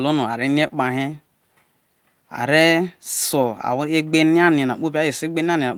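A speech clip with two network faults. Short concealed packet loss at 0.67–0.76 s: about 20 ms of audio never arrived, and the receiver extended the preceding sound to cover it, leaving a brief smear and a few milliseconds of added time. Lost packet rebuilt from error correction at 3.43–3.45 s: a rougher, noisier 20 ms stretch with no gap, consistent with one packet replayed from a low-bitrate copy carried in the next.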